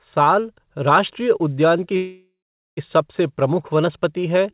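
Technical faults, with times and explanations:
1.96–2.79 s, call audio freeze: after "उद्यान की" the last sound smears into a fading buzz, then 430 ms of silence. "सबसे प्रमुख वनस्पति" resumes 810 ms late, likely because delayed packets emptied the jitter buffer. The spectrogram shows a blurred band below 4 kHz fading to blank, and the waveform decays, then goes flat.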